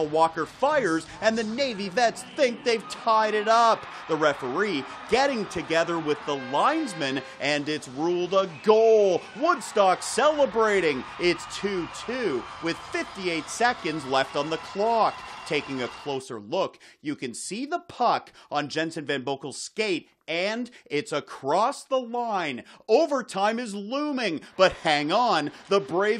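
Nothing stood out as a technical fault on listening.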